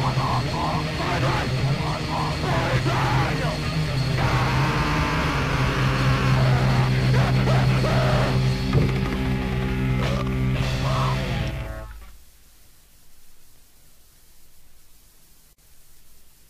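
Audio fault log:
throughout: crude rate conversion. Samples seem to be skipped or held rather than filtered, a pattern that fits a 48 kHz to 44.1 kHz change. The repeating timing error adds inharmonic tones, a gritty fizz about 30 dB below the audio that tracks loud, bright passages.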